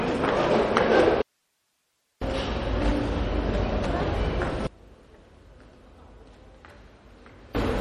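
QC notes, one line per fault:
Throughout, MP3 compression: the top end stops dead at about 16.3 kHz, and the codec damage is plainly audible as a watery, swirling texture with smeared attacks and metallic chirps on bright transients. This is likely a low bitrate, around 48 kbps, where the encoder runs short of bits, lowpasses the treble and lets weak frequency lines drop in and out from frame to frame.
1.22–2.22 s, audio dropout to a faint residue: the sound cuts out abruptly for about 1.0 s and returns just as suddenly, with only hiss left in the gap, roughly 50 dB below the programme level. The edges are hard cuts rather than a fade or natural pause. The likely cause is a lost feed while the downstream path stayed live, so what remains is the open input's noise floor.
4.67–7.55 s, one channel inverted: in this section the summed level falls by about 24 dB, leaving a faint residue where the centred content should be. 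That points to one stereo channel likely flipped in polarity, so the material common to both sides cancels on a mono sum and only the small left–right difference survives, which is why it sounds faint rather than simply quieter.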